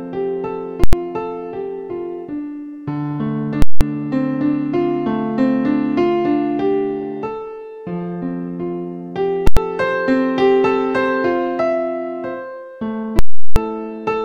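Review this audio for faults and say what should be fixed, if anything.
Invalid numbers at full scale occur at 0.84–0.93 s, 3.62–3.81 s, 9.47–9.57 s and 13.19–13.56 s. Each is a loud pop, then silence, then another pop, as whole blocks, lasting 93, 186 and 372 ms (which fits 4096- to 16384-sample blocks), were pinned at one extreme value. On a waveform they are flat rails at one extreme, far beyond the audio's peaks. A spectrogram shows broadband vertical lines at each edge. To prevent this, check every processed block for infinite or invalid values and replace them before output.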